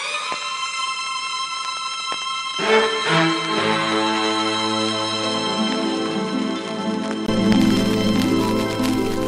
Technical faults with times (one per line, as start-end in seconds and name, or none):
0.00-7.28 input switched to a poorer device